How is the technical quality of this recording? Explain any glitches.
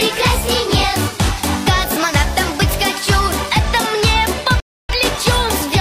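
There's one glitch worth flagging: a rebuffering stall from 4.60 to 4.89 s. The playback simply runs dry and drops to silence for about 0.29 s, then picks up at exactly the point where it stopped. What's happening is the player exhausted the audio it had already downloaded and had to wait for more before continuing. Nothing gets skipped or repeated; you just get an extra 290 ms of dead air inserted into the timeline.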